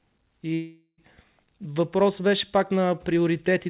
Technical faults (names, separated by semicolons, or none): long network dropout